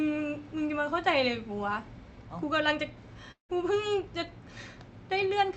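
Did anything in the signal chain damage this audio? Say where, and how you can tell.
Yes. At the network stage, from 3.31 to 3.51 s, the audio stops arriving, likely a long network dropout on the call path. The receiver stretches the last sound into a fading buzz, then leaves near-silence, and about 180 ms of sound is lost before it resumes.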